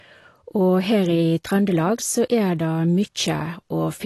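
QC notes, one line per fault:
Throughout, AAC compression: dull, smeared speech with fizzy, warbling sibilants and nothing above 12 kHz, likely from low-bitrate AAC-LC, which fits about 32 kbps.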